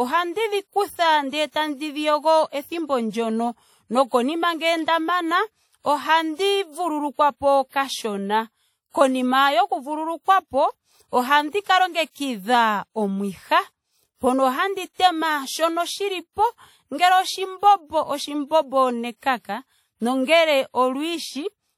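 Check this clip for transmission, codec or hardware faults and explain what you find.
One codec fault runs through the whole recording: the speech carries WMA compression damage, and it is plainly audible from start to finish. The sound is ringing and washy, with a hiss that swells and fades along with the speech rather than sitting at a steady level. That is likely a transform codec using long blocks, whose quantisation noise smears over tens of milliseconds. The depth of the damage points to a low bitrate around 48 kbps, where quiet spectral detail gets discarded. Nothing is heard above 19.2 kHz. That breathing hiss is the key difference from a fixed background noise floor, which holds steady through pauses.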